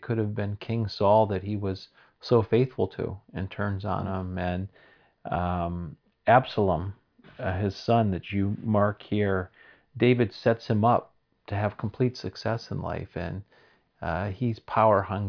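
No audible technical fault turns up anywhere in this speech recording.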